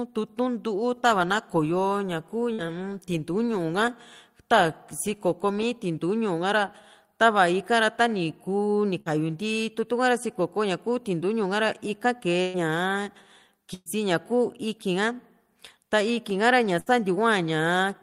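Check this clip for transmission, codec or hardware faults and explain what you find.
The speech has five bursts of packet loss, at 2.53–2.61, 9.00–9.09, 12.42–12.57, 13.74–13.89 and 16.80–16.89 s. At each, consecutive packets never arrived in time, so the receiver stretched the last sound into a fading buzz or hiss for 50, 52, 120, 120 and 64 ms, and then skipped ahead. About 60 ms of speech is missing at the first, second and fifth bursts, and 120 ms at the third and fourth. The fourth ends with about 30 ms of true silence. Unlike a plain dropout, these gaps are mostly filled with a decaying smear rather than cut to silence.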